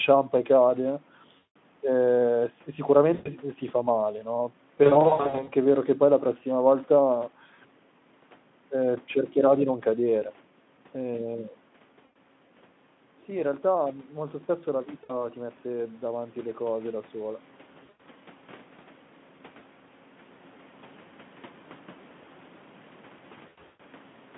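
VoIP packet loss concealed by the speech codec first appears at 1.37 to 1.56 s, after "e cade", where about 180 ms of audio went missing. When the packets stopped arriving, the decoder kept extending its last pitch and spectral shape while lowering the level, so the speech turns into a buzzy tone or a coloured noise that fades. It recurs at 3.13 to 3.28 s, just before "s si fa male", and at 12.05 to 12.17 s. At 4.83 to 5.49 s, after "si fa male no", short gaps of up to 60 ms are scattered over about 640 ms and leave the voice weak or distorted.

Automatic gain rising runs from 13.27 to 17.45 s. The input dropped by about 12 dB, and the gain control answered by slowly raising its gain about 6 dB, so speech and room noise swell together over several seconds.

More concealment follows at 15.03 to 15.25 s, 17.83 to 18.02 s and 23.47 to 23.81 s. The last of these has gaps of up to 120 ms, and each is heard as a brief stretch of buzzy tone or coloured noise that fades.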